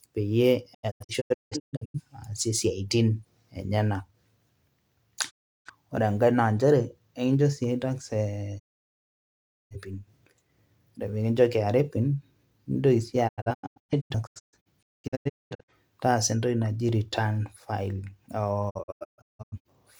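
Speech with repeated digital broadcast dropouts: the receiver mutes on lost frames, fading out over 20 ms. Scattered holes at 0.73–2.00 s, 13.27–15.72 s and 18.69–19.80 s; solid gaps at 5.29–5.70 s and 8.58–9.76 s. Waveform and spectrogram show flat, empty blocks.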